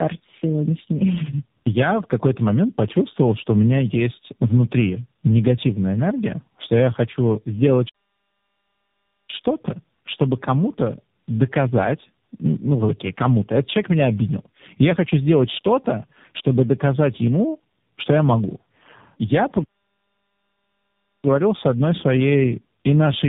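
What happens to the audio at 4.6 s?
At 4.6 s, as throughout, tandem speech coding: repeated decode-recode passes compound into muffled, warbly roughness beyond any single codec, with nothing above 3.7 kHz.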